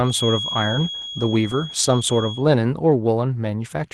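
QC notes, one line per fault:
0.00–2.46 s, feedback whistle: a thin, slowly swelling and fading 3.3 kHz tone roughly 10 dB under the speech, likely a speaker-to-microphone loop held just below runaway.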